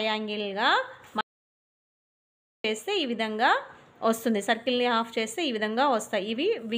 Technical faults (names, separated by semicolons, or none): audio dropout to silence